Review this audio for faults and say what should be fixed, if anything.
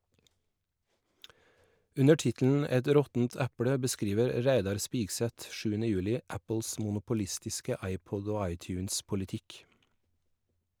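No faults here, so nothing needs fixing.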